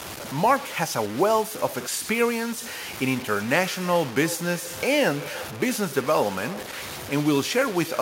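Throughout this speech clip the signal was likely reduced to about 5 bits and truncated with no dither, so the rounding error tracks the speech instead of sitting as a steady hiss. The result is a grainy, gritty distortion that changes with every syllable, with the error only around 15 dB below the speech. Quiet tails and pauses below one step drop to silence or sputter between the few available steps rather than fading smoothly. From 2.78 s to the end there is feedback echo between two devices: a second device in the same room plays back what the first microphone sent, and that microphone picks it up again. Neither echo canceller can remove sound played by the other device. Each phrase returns roughly every 0.3 s, thinner and more ringing on each pass, at its loudest about 17 dB below the direct speech.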